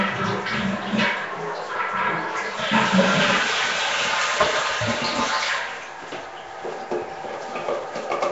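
Rough, hissy Nellymoser compression runs throughout, with nothing above 7.8 kHz. Sound is smeared and underwater-like, likely from Flash's Asao codec near 32 kbps.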